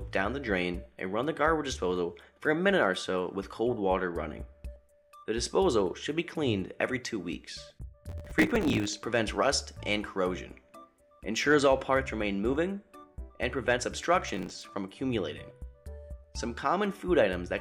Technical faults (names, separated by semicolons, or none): processor overload crackle